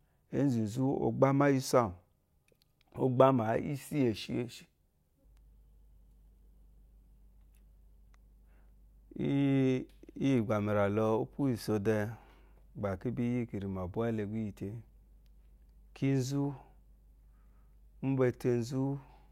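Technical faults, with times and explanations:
Nothing stood out as a technical fault on listening to this speech recording.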